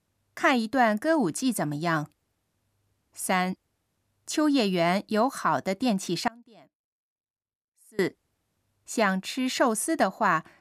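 From 6.28 to 7.99 s, an audio dropout to a faint residue cuts abruptly to a faint sound about 25 dB down, likely a lost feed, not a natural pause.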